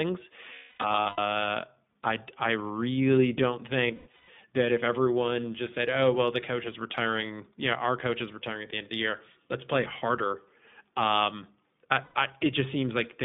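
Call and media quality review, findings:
iLBC codec throughout: narrowband speech, 150 Hz to 3.6 kHz, rough and slightly synthetic. The spectrogram shows a hard ceiling near 3.6 kHz, and the texture fits 20 ms frames at about 15.2 kbps.

Lost iLBC frames at 0.54–1.20 s (about 500 ms missing, longest run around 300 ms), 3.88–4.29 s (about 300 ms) and 12.04–12.15 s (100 ms). The decoder repeats the last pitch cycle with noise, so each gap sounds like a held, buzzy vowel. On a spectrogram this shows as flat repeated harmonic bands fading out, followed by an immediate clean recovery.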